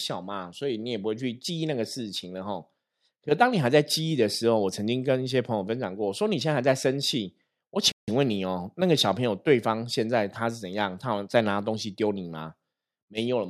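A speech clip with a playback stall from 7.92 to 8.08 s: the sound halts mid-flow into a clean silence of about 160 ms, likely because the player ran short of data or its thread was blocked. The gap is a sustained silence, not a brief click or crackle.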